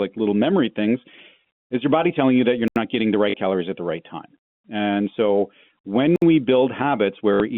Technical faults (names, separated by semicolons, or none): block of digital silence; packet loss with last packet repeated